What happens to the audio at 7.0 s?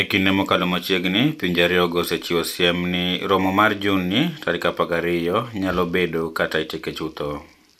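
Nothing goes wrong at 7.0 s; the speech there plays through cleanly, with no dropout, glitch or distortion.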